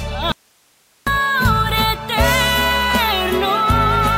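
The signal feed was likely lost for about 0.75 s while the path after the break stayed live, an audio dropout to a faint residue. From 0.32 s to 1.07 s the sound cuts out abruptly, leaving only hiss roughly 40 dB below normal, then snaps back.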